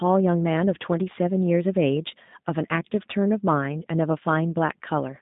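From start to end the speech carries G.729 codec damage, plainly audible throughout. The sound is confined to a telephone band of roughly 150 Hz to 3.7 kHz, with nothing above 3.8 kHz, so it sounds dull and boxy. The codec rebuilds each 10 ms frame from a vocal tract filter, a pitch predictor and a few coded pulses instead of the real waveform. That makes the speech rough and faintly synthetic, and the result fits an 8 kbit/s G.729A coder.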